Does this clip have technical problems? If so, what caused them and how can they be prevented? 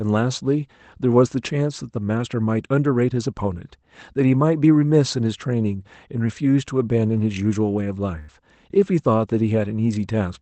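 Yes: a burst of packet loss from 8.19 to 8.29 s. About 90 ms of audio never arrived, so the receiver held and faded the last sound before the speech resumed. On a spectrogram it shows as smeared, decaying bands; on the waveform, a shrinking envelope followed by an abrupt restart. It can be prevented with forward error correction and a larger jitter buffer on lossy networks.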